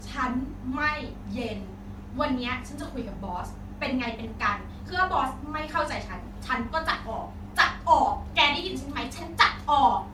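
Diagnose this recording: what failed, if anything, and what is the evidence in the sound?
Generation loss is the likely culprit, at the codec stage. The speech sounds swirly, smeared and hollow all the way through, with softened consonant attacks, yet the top end still reaches 20 kHz. That fits about four MP3 passes near 96 kbit/s, each requantising on a shifted frame grid.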